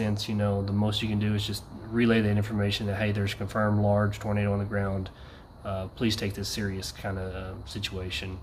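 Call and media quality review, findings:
No audible technical faults: level, continuity and timing hold steady throughout the audio, with no dropouts, discontinuities or distortion detected.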